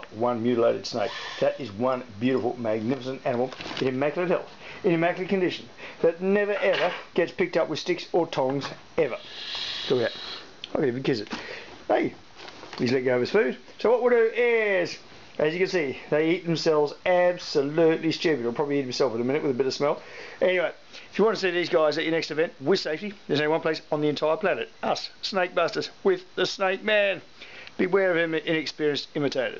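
No technical faults can be heard anywhere in this audio. Nothing in it calls for a time mark or a closer listen.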